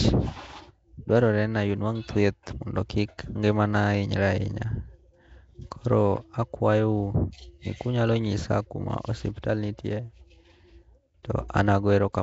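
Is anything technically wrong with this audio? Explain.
Yes, the speech sounds like it went through Nellymoser compression, likely from the old Flash microphone codec at around 32 kbps. Nothing gets above 7.8 kHz, and the weak bands starved of bits come back as noise, so the speech has a rough, hissy halo and a smeared, underwater feel throughout.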